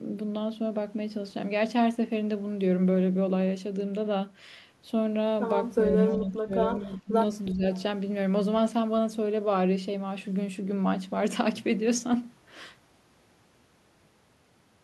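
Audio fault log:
6.2–6.53 s, 6.81–7.13 s, 7.52–7.64 s: speech suppressed in double talk. The speech dips by up to about 20 dB, likely an echo canceller ducking both overlapping talkers.
7.75–7.8 s: echo leak. A faint copy of the speech returns 370 ms late, about 30 dB down, likely residue a far-end echo canceller missed.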